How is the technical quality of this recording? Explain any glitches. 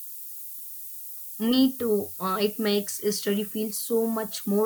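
Technical quality is poor: a heavy hiss sits on the speech from start to finish.

That's low bit depth with noise shaping, and it sounds like something around 6 bits. Rounding errors get pushed upward, so you hear a thin, bright hiss climbing toward the top end, only about 10 dB under the speech.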